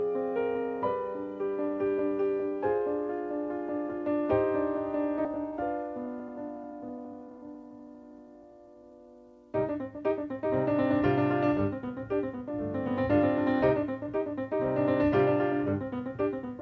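A skip ahead at 5.25 s makes playback jump forward with no gap, dropping roughly half a second of sound and splicing the two sides almost directly. A jitter buffer that overflowed and discarded a stretch of audio while later audio was waiting fits this. The call path's 8 kHz bandwidth limit, consistent with G.722, applies throughout.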